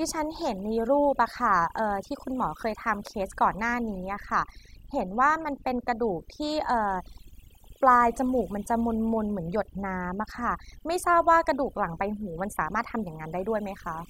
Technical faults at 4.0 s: overdone noise removal

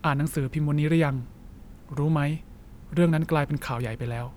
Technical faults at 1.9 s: none

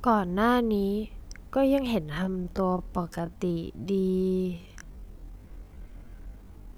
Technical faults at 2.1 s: time-stretched section

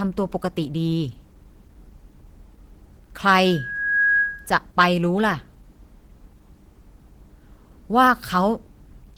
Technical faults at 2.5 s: Opus compression

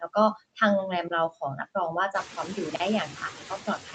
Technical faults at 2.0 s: noise suppressor artifacts

